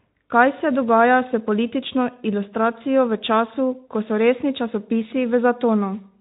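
Nothing here goes wrong at any point; the speech comes over the Speex link just as that path normally sounds, with its top end stopping at around 3.8 kHz.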